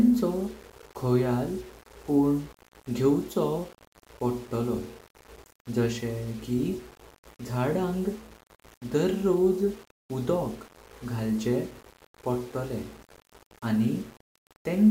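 It's a speech clip, and the whole thing carries a grainy, gritty edge that shifts with the talking. Quiet syllables and word tails turn rough and sputter, and the softest bits drop out to silence rather than fading smoothly. That's low bit depth without dither, likely a plain rounding down to something like 7 bits, so the error tracks the signal instead of sitting as steady hiss, roughly 25 dB below the speech.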